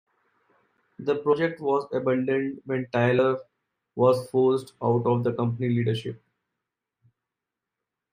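Compressed frames skipped: two 32 ms frames went missing or were rejected by the decoder at 1.33 s, just before "was abandoned when", and again at 3.18 s, right after "was abandoned when". Each time the speech jumps ahead by about 70 ms.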